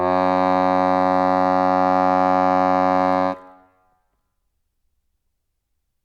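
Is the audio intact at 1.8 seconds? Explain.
Yes, the music at 1.8 seconds plays through intact, with no fault at that moment.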